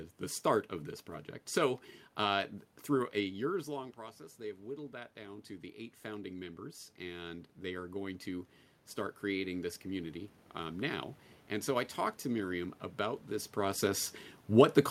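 From 4.91 to 8.57 s there is automatic gain rising. The input level dropped by about 13 dB, and the automatic gain control read that as too quiet. It then raised its gain by about 7 dB, slowly, over more than three seconds. The voice swells back up, and the room noise swells with it, since both pass through the same gain. The rise settles just before "start creating this community".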